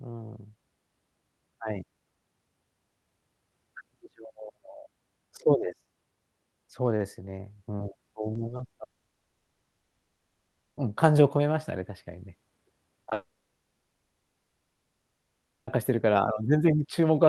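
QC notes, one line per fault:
8.33–8.37 s, 8.47–8.51 s, 8.57–8.61 s: short concealed packet loss. Three 20 ms gaps about 0.1 s apart, each filled by extending the preceding sound and blending back. The result is a quick smeared, fluttery patch in the speech, the first sign of network trouble.
8.83–10.79 s: long network dropout. About 1.94 s of audio is missing. A brief synthetic continuation fades within the first tenths of a second, then roughly 1.9 s of silence follows. Speech resumes later without the lost section. This is likely packet loss on the call link.
13.03–13.13 s: short concealed packet loss. Consecutive 40 ms and 20 ms gaps, about 60 ms in total, are bridged by extrapolating the last sound. This gives a short wobbling smear that leads directly into the next dropout.
13.13–15.72 s: long network dropout. About 2.5 s of audio never plays. Concealment buzz decays quickly into roughly 2.4 s of silence, and the speech returns further on with that stretch gone. 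This is likely the same network path failing again, with the Opus call audio band-limited to about 12 kHz around it.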